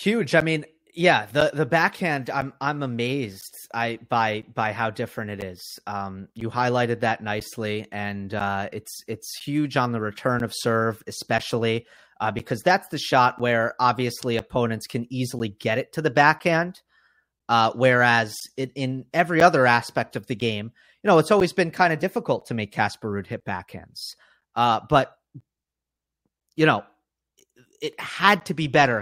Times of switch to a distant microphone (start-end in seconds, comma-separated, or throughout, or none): none